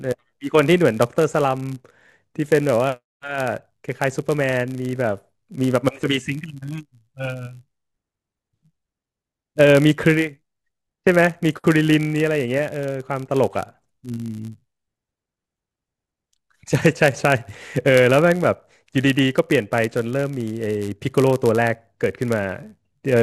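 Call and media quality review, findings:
Block size mismatch (padded), whole clip, speech. Steady buzz at 99.6 Hz throughout. Probable cause: an upstream stage handing over blocks a touch short of what the next stage reads, with the shortfall zero-filled. That leaves a tiny gap in every block, which fits blocks of roughly 10 ms. Side effect: playback runs at 0.996x, slightly slow, pitch basically unchanged. Check block sizes at that stage boundary.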